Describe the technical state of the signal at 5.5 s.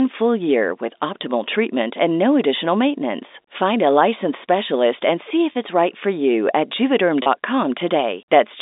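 At 5.52 to 5.55 s, between "licensed specialist and see" and "it's right for you", there is packet loss with pitch repetition. About 30 ms of audio, which fits a single lost packet on this G.711 telephone line, was bridged by repeating the last pitch period. The result is a brief held, slightly buzzy tone rather than a gap. This separates it from a plain dropout, which would leave silence or a click.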